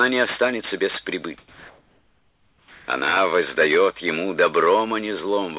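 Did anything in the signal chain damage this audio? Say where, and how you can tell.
Yes, at the call-processing stage. From 1.38 to 2.88 s the background is replaced by comfort noise: the real room tone, already about 41 dB below the loudest parts, gives way to a steady, featureless hiss about 6 dB quieter. The likely cause is discontinuous transmission, where the receiver fills the pause with synthetic noise. A noise gate or dropout would leave silence; here the noise is smooth, level and lacks the original texture.

The sound returning at 2.85 s shows an onset clipped by the voice detector. About 30 ms of its beginning is missing, so it starts abruptly, with comfort noise running right up to 2.88 s. That is likely the sender's detector reacting late to the restart. A codec pre-echo or fade would smear the attack, whereas here it is simply cut, within the call path's 4 kHz band limit.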